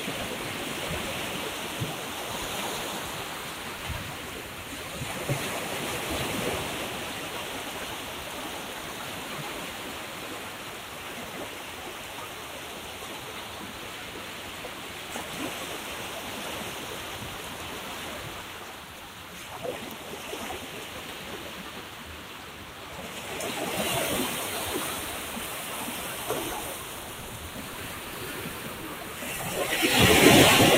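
No technical faults are audible anywhere in this recording of sounds.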